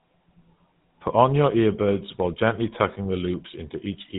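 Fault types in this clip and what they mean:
GSM full-rate codec: The speech passes through the first GSM mobile codec from start to finish. It models the vocal tract as a filter and excites it with a sparse train of regular pulses. Much of the fine detail in the excitation is thrown away. The result is a plainly audible buzzy, gravelly roughness. Nothing comes through above about 3.8 kHz, so sibilants sound dull. The damage fits a bitrate of about 13 kbps.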